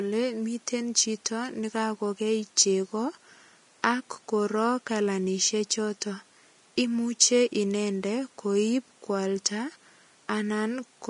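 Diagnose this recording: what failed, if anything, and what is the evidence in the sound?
The failure sits at the codec stage, and the likely cause is Vorbis compression. It runs through the whole speech clip. Nothing is present above 10.6 kHz. The upper band sounds hissy and grainy, and consonant attacks are smeared. The damage is plainly audible, which fits a bitrate around 34 kbps. At that rate the encoder drops the cut-off and quantises the treble residue so coarsely that fine detail turns into noise.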